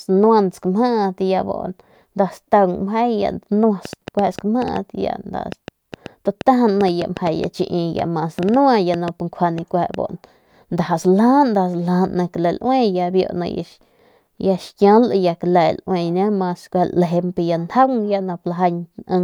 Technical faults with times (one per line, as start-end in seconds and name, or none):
3.85-9.95 train of clicks